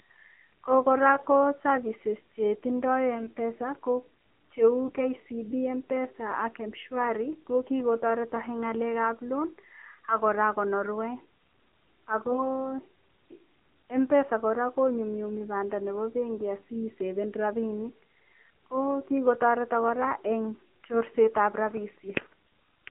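Throughout, the speech sounds thin, buzzy and synthetic within roughly 200 Hz to 3.4 kHz. This is the AMR narrowband mobile codec squeezing the speech into 7.4 kbps. Just after "ko services che tindo", from 3.15 to 3.28 s, and again at 4.87 to 5.08 s, 12.24 to 12.69 s and 21.20 to 21.36 s, the speech turns briefly hoarse, scratchy and gargly without losing its pitch or level. These are AMR bit errors: a few percent of the weakly protected bits arrived flipped, misplacing the pulses that drive the voice model.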